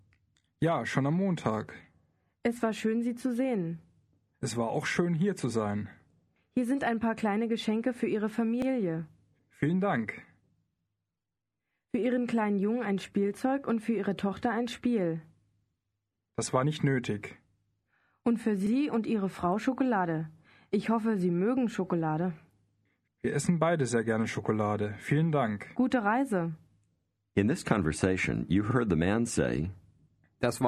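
At 8.62, 18.67 and 28.71 s you get a little stutter from overlapping chunks: the audio was handled in 10-second blocks, and each new block starts 44 ms before the previous one finished, so that sliver plays twice at every join.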